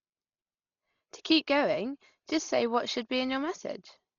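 Throughout the speech, the sound is dull, with nothing above 7 kHz and a rough, fluttering noise around tones, heavy damage that is likely Dolby Digital compression at a very low bitrate, around 32 kbps. Unlike a plain low-pass filter, the encoder leaves many frequency lines without detail and the decoder fills them with noise.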